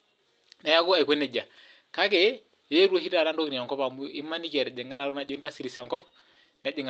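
From 4.87 s to 6.65 s, the speech breaks up with repeated packet loss (robotic sound): over a dozen short dropouts, the longest about 80 ms, each patched by extending the previous sound. Roughly a quarter of that stretch is concealed, giving a choppy texture.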